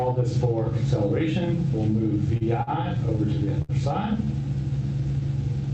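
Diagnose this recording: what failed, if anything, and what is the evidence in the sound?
The failure is at the network and jitter-buffer stage: a short stall from a late packet, at 2.37–2.43 s, 2.63–2.69 s and 3.62–3.71 s. The buffer ran dry and the last sound was stretched for 35, 43 and 67 ms, then resumed from the same place. Unlike packet loss, nothing is skipped; the sound simply runs later.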